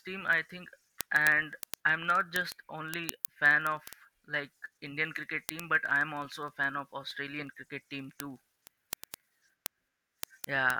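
From 0.12 s to 10.76 s the speech carries word clock ticks: sharp clicks of uneven strength, about twenty per second. A receiver on its own clock, a few hundred ppm off, slips one sample at each crossing. Unlike random clicks, they keep a steady rate.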